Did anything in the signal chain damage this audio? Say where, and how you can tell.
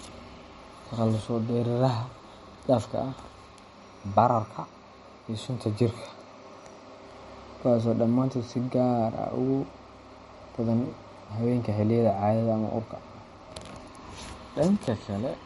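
Yes. Throughout, the speech sounds watery and swirly, with nothing above 11.2 kHz. This is likely MP3 compression at the codec stage: a bit-starved encoder, consistent with about 46 kbps, cuts treble and flickers weak bands.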